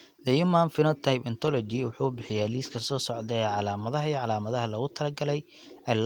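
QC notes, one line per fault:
1.43–3.13 s: call bitrate drop. The encoder was starved of bits for about 1.63 s, roughly 32 down to 15 kbps, so the sound turns coarse, watery and dull-topped with the highs trimmed. It is continuous, with no gaps or repeats like packet loss, and it recovers before the clip ends.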